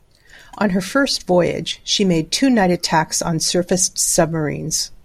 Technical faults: none

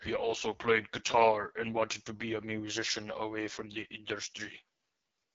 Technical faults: AMR wideband (HD Voice) codec

